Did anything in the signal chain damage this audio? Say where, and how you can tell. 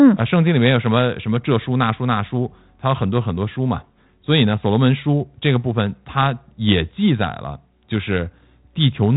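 No, nothing stood out on listening as damage from any stage of the signal chain.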